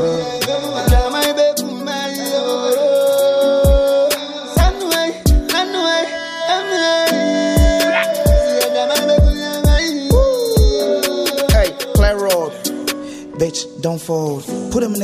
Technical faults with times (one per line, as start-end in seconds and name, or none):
none